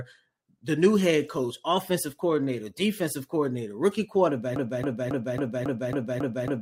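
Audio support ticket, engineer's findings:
Broken-record loop from 4.56 s to end, after "coordinator defensive coordinator rookie". Identical 0.27 s speech fragment repeats back to back eight times, no decay or variation, unlike echo. Likely stalled player or stream resending its last held buffer; following audio lost.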